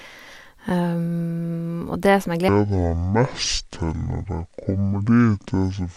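At 2.49 s the speech drops into a section at the wrong speed, running to the end. It plays at half speed, so it turns deep and slow, roughly ten semitones lower. The likely cause is playback against a mismatched clock.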